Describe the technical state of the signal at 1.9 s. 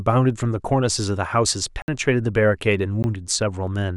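At 1.9 s the speech has just recovered from a block of digital silence running from 1.82 to 1.88 s. For 60 ms the audio dropped out to silence, likely because the output buffer went unfilled in time. The edges are abrupt, and the gap sounds like a short hole.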